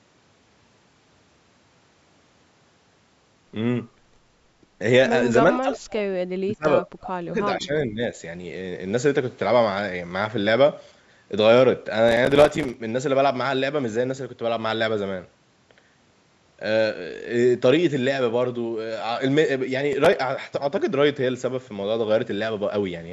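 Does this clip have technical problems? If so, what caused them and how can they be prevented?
Yes. Between 5.58 and 6.09 s, 6.42 and 7.37 s, and 7.58 and 8.16 s, the speech sinks, by about 30 dB in the first two stretches and about 15 dB in the third. This is likely speech suppressed in double talk: the echo canceller could not separate the local talker from the loudspeaker echo and attenuated everything. A better-converged canceller with proper double-talk detection would prevent it.

From 12.09 to 12.74 s, and more briefly from 19.93 to 20.13 s, a gritty crackle tears through the audio. This is processor overload crackle: the processor repeatedly missed deadlines, and each miss dropped a few milliseconds to silence, dozens of times in the longer burst. Reducing the processing load or using larger buffers would prevent it.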